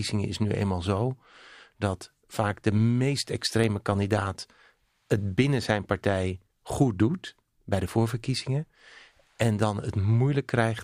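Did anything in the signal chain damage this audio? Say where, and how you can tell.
Yes: the driver or buffer stage likely dropped samples, under a millisecond each. The waveform jumps, giving single sharp clicks at 3.64 s and 7.14 s.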